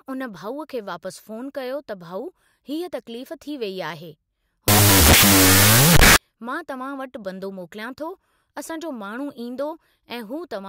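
A wrong sample width runs from 4.68 to 6.16 s: audio stored as 16-bit samples is read as unsigned 8-bit, so each byte becomes its own value. Loud hiss swamps the sound, which plays at half speed, an octave low.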